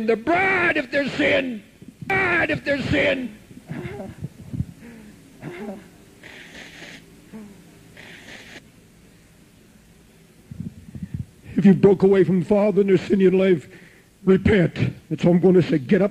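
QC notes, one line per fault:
0.65–0.71 s, 3.21–3.27 s, 5.39–5.44 s, 11.61–11.65 s, 15.65–15.71 s: damaged data in a compressed stream. Five short bursts, each 40 to 60 ms, come through as brief chirps, squawks, clicks or short holes. Corrupted bytes in the encoded stream leave the decoder unable to read those frames. It loses sync and jumps ahead to the next valid frame header.
2.10–8.59 s: doubled audio track. A second full-band copy of the sound runs about two seconds behind the original at roughly the same level. It switches in and out abruptly at both ends and carries no decay or room colour, so it is a straight duplicate rather than an echo. The likely cause is the same signal reaching the mix twice, once through a slower path, leaving two out-of-step copies layered together.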